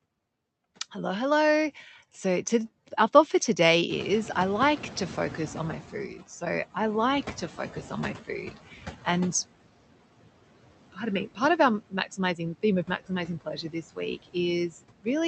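Noise suppressor artifacts run through the whole speech clip. The suppressor pulls the background down by about 17 dB, frame by frame, so the noise dips in the gaps and swells back under the talking. The top end stops around 8 kHz, which fits an Opus call path at about 48 kbps.

At around 4 s the room noise jumps by about 19 dB, and from 3.89 to 6.22 s you can hear the noise suppressor catching up. Its noise estimate lags the jump, so the louder background pushes through with less reduction at first. Over about 2.3 s it settles into roughly 12 dB of cut and the noise sinks again, ending up about 15 dB under the voice.

From 7.41 s there's speech cut by the noise suppressor, because it takes parts of the voice for background. Between 7.41 and 9.07 s, about a third of a second in total gets turned down by up to about 13 dB. Between 10.93 and 14.36 s it's worse, with around 0.7 s affected and drops of about 17 dB. 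From 14.69 to 15.07 s a brief stretch dips by about 19 dB. Those bits sound swallowed or faint.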